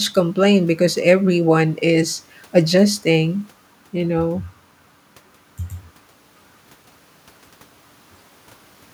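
No technical faults can be heard anywhere in the speech recording; the signal stays continuous and steady throughout.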